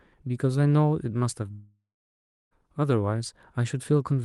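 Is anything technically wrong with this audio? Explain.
Yes. There is a long network dropout from 1.51 s to 2.53 s. The sound smears into a fading buzz, then about 0.66 s of near silence follows. The likely cause is a stretch of lost packets. The receiver stretched the last sound, then gave up. About one second of speech never returns. The call codec limits the band to roughly 12 kHz.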